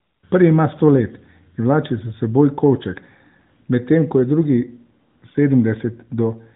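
No technical faults are audible in the speech; it comes through a narrowband AMR mobile link at 12.2 kbps, which leaves it lightly coloured by the codec with nothing above about 3.8 kHz.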